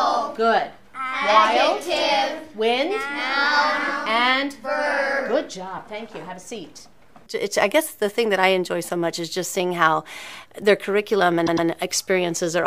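At 11.46 s a repeated-frames fault begins and runs to 11.67 s. A 104.5 ms block of the sound plays two extra times, heard as a stutter. The block fits a run of about four compressed frames written again. This adds 209 ms to the audio.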